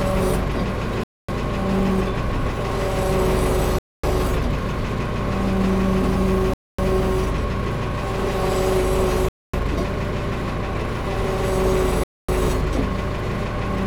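Everyday sounds are cut by a gap between chunks: 250 ms silences at 1.04–1.29, 3.79–4.04, 6.54–6.79, 9.29–9.54 and 12.04–12.29 s, between 2.5 s stretches. Waveforms show flat silent blocks; spectrograms show sharp-edged blank vertical bands.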